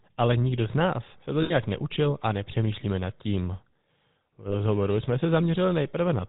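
It's a speech clip, and the whole thing has the buzzy, gravelly roughness of the GSM full-rate codec, which fits the 13 kbps phone coder. That codec models the vocal tract and drives it with a sparse, regularly spaced pulse train instead of the real excitation, so the voice comes out grainy and a bit synthetic. Nothing gets through above 4 kHz, so it sounds dull and band-limited. The damage is plainly audible throughout. There are also two spots with lost GSM frames. At 1.42 to 1.52 s, right after "z nás se to" and just before "neučil a nepřemýšlíme nad", about 80 ms of audio drops out. The second is at 4.48 to 4.56 s, just before "jsme se", and covers about 40 ms. In both, the decoder keeps replaying the last good frame's settings, so you hear a short metallic ring smeared over the gap rather than a clean dropout.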